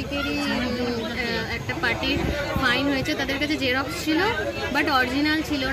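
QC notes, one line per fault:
No faults were heard in this clip. Nothing calls for a QC entry.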